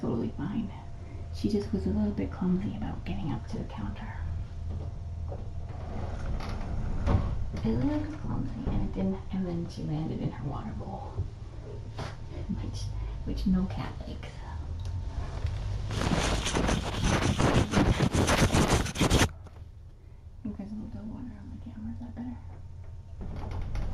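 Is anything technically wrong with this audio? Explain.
Yes. At 18.81 s there is an electrical switching spike, a very short snap or click cluster lasting about 3 ms on top of the sound. The likely cause is a nearby switch, motor or static discharge arcing, with the line picking up that burst.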